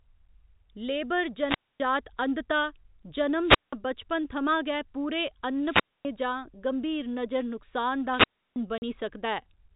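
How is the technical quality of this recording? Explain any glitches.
The speech has two kinds of glitches: repeated wireless dropouts and one short digital gap. It all comes through a G.711 phone channel, so nothing above 4 kHz is there.

Wireless microphone squelch dropout happens four times: 1.41–1.80 s, 3.41–3.73 s (right before "बचपन थमां गै पूरे"), 5.59–6.07 s (between "बचपन थमां गै पूरे" and "जां गंभीर नजर नुक्सान"), and 8.13–8.56 s (after "गंभीर नजर नुक्सान दा"). Each time the mic's FM radio signal fades, hiss swells, and the receiver's squelch shuts the output. That leaves a near-silent hole of about 0.26, 0.18, 0.25 and 0.32 s before the speech comes back.

Packet loss filled with silence hits at 8.78–8.82 s, just after the last dropout. It's a 40 ms hole, which fits two lost 20 ms packets. The receiver dropped in plain silence instead of concealing the gap, so the sound is cut off abruptly, with hard edges.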